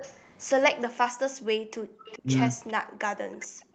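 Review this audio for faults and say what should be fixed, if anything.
Echo leak: a faint copy of the speech trails the original by 410 ms at 0.0–0.33 s, 2.04–2.2 s, 2.67–2.73 s and 3.4–3.65 s. It sits about 20 dB down, and about 30 dB down at 2.67 s. The likely cause is a far-end echo canceller letting loudspeaker pickup through. On a spectrogram it shows as weak, shifted repeats of the speech harmonics. Fix it by retuning the far end's echo canceller or reducing its loudspeaker volume and coupling.

Background gated by the echo canceller: the room noise drops out at 1.1–1.93 s and again from 2.83 s to the end, sinking by up to about 40 dB, with around 0.7 s affected in the first stretch. The canceller is clamping the microphone while the loudspeaker plays. A spectrogram shows near-empty gaps in the noise floor, and the waveform shows flat stretches between sounds. Prevent it by using gentler residual suppression with comfort noise.

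Speech suppressed in double talk: at 2.21–2.3 s the speech dips by about 20 dB for roughly 100 ms, likely because the canceller mistook overlapping talk for echo. The waveform shows a short notch in the speech envelope, and the spectrogram shows a brief fading of the harmonics. Better double-talk detection in the canceller would prevent it.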